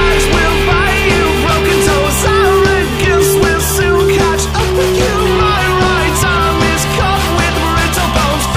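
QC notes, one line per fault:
4.53–6.17 s, drift correction step: playback drops about 5.4% slower and pitch falls 96 cents, nearly a semitone, then returns at 6.17 s. Speed and pitch move together in one abrupt step rather than wavering like wow, likely a clock-matching rate adjustment.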